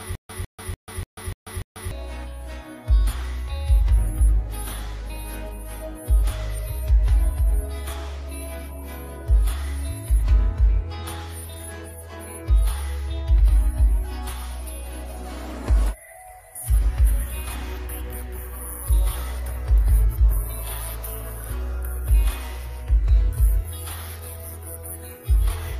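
From the very start until 1.91 s, a 152 ms burst of sound repeats six times with about 141 ms of dead silence between, every 293 ms: a stutter with silent gaps. The likely cause is a stalled stream replaying its last fragment at each retry, so the intervening audio is lost.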